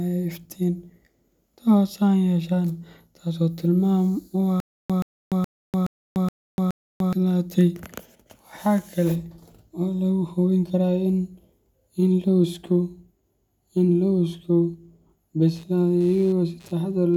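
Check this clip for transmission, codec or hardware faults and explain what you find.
Two faults stand out: a stutter with silent gaps in the middle of the clip, and computer activity noise at the very end.

From 4.60 to 7.13 s, the stream most likely stalled and, at each retry, replayed its last buffered fragment before running dry. A 126 ms slice of speech repeats six times at a steady 421 ms period, each burst followed by about 295 ms of dead digital silence. The speech that should have filled that stretch never arrives, so the sentence simply resumes further on.

From 15.56 s to the end at 17.17 s, shifting load from the processor, graphics card or mouse is disturbing the audio circuit's shared ground. That ground noise leaks into the signal as a buzzy, chirping pulse train around 150 Hz, sitting roughly 35 dB below the speech. Its rhythm follows the computer's activity rather than anything in the voice, so it sounds like a faint scratchy whine riding independently underneath.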